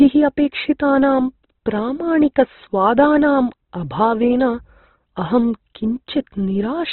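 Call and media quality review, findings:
Speech muffled and band-limited throughout, nothing above 4.1 kHz; narrowband character. Sound rough and grainy rather than swirly, consistent with band energy preserved but fine detail filled in with noise. Probable component: likely Opus compression at a very low bitrate, sound fitting around 12 kbps, music-style coding. Heavy codec damage.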